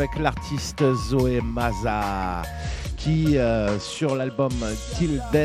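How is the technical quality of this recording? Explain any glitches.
The recording has one clear fault, a Bluetooth SBC bit pool drop from 2.61 s to 5.12 s. The link appears to have become congested, and the sending device cut the SBC bit pool to keep the stream alive, consistent with a fall from around 31 to about 12, near 88 kbps. With so few bits, the highest sub-bands get almost nothing and the rest are quantised coarsely. The treble goes dull and a gritty grain appears until quality recovers.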